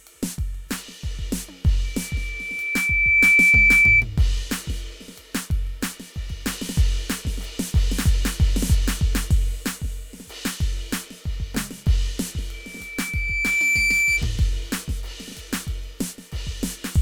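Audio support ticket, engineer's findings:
Loudspeaker feedback squeal at 1.84–4.05 s and again at 12.53–14.25 s over the music. A single 2.3 kHz tone swells up over roughly a second and a half the first time and about a second the second time. It peaks around 10 dB, then around 5 dB, above the music. The mic–speaker loop gain exceeds unity at 2.3 kHz. Unlike a steady interference whistle, it starts faint, grows on its own at the same pitch both times, then cuts off.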